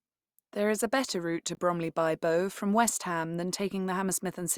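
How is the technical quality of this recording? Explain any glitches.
There's one glitch in this speech recording. At 1.55 to 1.57 s, right after "a better route to", a 20 ms block of digital silence drops in: the audio was replaced by silence, likely because the output buffer wasn't filled in time, so the audio cuts out and back abruptly, leaving a brief hole.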